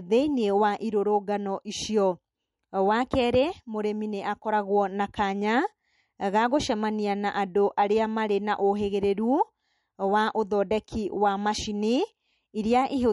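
Speech throughout, with plainly audible MP3 compression likely responsible: nothing above 11.1 kHz, plus watery, swirly artefacts that fit a low bitrate around 48 kbps.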